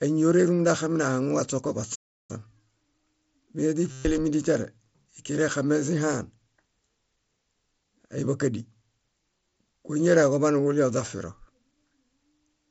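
At 1.95 s the speech cuts to silence until 2.31 s, a gap of about 340 ms, and then resumes. This is a playback stall, likely the player running out of buffered data or its output thread being blocked.

From 3.91 to 4.05 s there is concealed Bluetooth headset packet loss. About 135 ms of the mSBC headset stream went missing. The receiver filled the gap by repeating recent waveform, so the audio turns into a buzzy, steady tone at full level and warbles briefly as real speech returns.

Between 4.16 and 4.18 s a sharp snap sits on top of the speech. This is an electrical switching spike, likely a nearby switch or static discharge arcing and being picked up on the audio line.

At 9.50 s there is a second concealed packet loss of about 22.5 ms.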